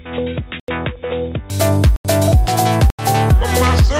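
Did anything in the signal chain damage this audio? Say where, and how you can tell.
Yes. From the start to 1.5 s the sound is dull and boxy, with nothing above 3.8 kHz, about 10 dB quieter and with a faint added noise floor. It then opens up with no gap. This is likely an input switched to a poorer device at the capture stage.

Three short holes fall at 0.60–0.68 s, 1.96–2.05 s and 2.90–2.99 s, each 85 ms long. These are blocks of digital silence from a driver or buffer underrun, where an unfilled output buffer was zeroed, which fits a 4096-sample buffer.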